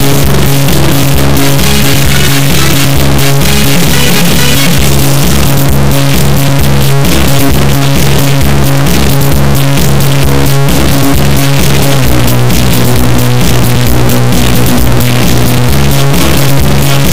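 Integer read as float runs through the whole clip: the raw sample values are being read as floating-point numbers, which fits 32-bit integer data read as 32-bit float. Most values land near zero or far beyond full scale, so the output jumps between silence and hard clipping, heard as a harsh, extremely loud buzzing square wave that drops out in the quietest passages.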